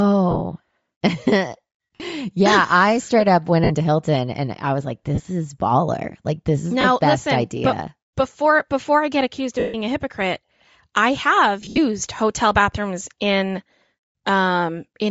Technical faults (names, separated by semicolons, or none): Bluetooth LC3 compression; lost LE Audio frames